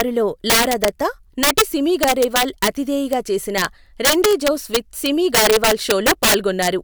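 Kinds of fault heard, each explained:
Integer overflow: throughout the speech, gain pushed about 10 dB too hot wraps the few loudest peaks to the opposite sign, producing violent cracks on louder moments.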